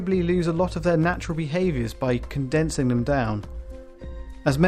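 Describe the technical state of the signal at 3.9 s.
At 3.9 s the signal is intact, with no dropout, distortion, glitch or other audible fault at that moment.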